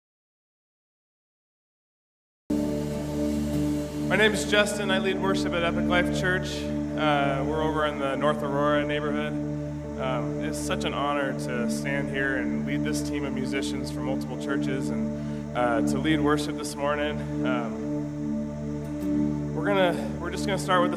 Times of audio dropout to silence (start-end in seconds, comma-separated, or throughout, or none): 0.00-2.50